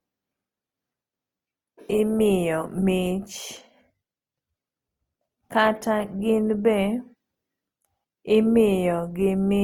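Right through the clip, the speech carries the artefacts of a heavily squeezed codec, even though the file itself is a generous MP3. Nothing sits above 20.2 kHz. This is likely low-bitrate audio saved at a high bitrate: the sound points to an Opus encode around 24 kbit/s, later re-saved as MP3 at roughly 256 kbit/s. The second pass can't bring back what the first stripped out, so those artefacts just ride along.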